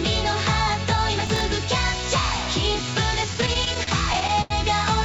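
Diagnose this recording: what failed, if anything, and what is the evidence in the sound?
Processor overload crackle at the driver or buffer stage, 1.27 to 1.41 s: a handful of tiny buffers, about 3 ms each, missed their deadlines and replayed old audio. The result is gritty tearing rather than dragging.

Repeated stalls (stutter) in the network and jitter buffer, 3.34 to 4.52 s: twelve late-packet waits, the longest 87 ms, were bridged by stretching sound, 243 ms in total. Nothing is lost, so the audio drags instead of dropping out.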